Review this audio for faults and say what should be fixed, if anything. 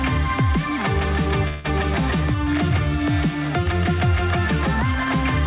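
A call audio freeze runs from 1.48 to 1.66 s. The last sound carries on as a fading buzz or hiss for 162 ms, then resumes exactly where it stopped, so nothing is lost but everything after arrives 162 ms late. The likely cause is delayed packets emptying the jitter buffer. On a waveform this shows as a short, decaying, regularly repeating stretch. On a spectrogram it appears as smeared, frozen horizontal bands that fade out below the 4 kHz ceiling of the G.711 A-law path. To prevent it, give the jitter buffer more headroom or improve network stability so packets are not held up in transit.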